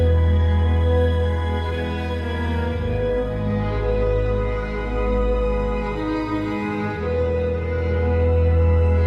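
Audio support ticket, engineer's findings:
Listened through the music clip and found nothing to flag, so no fault to log on this one.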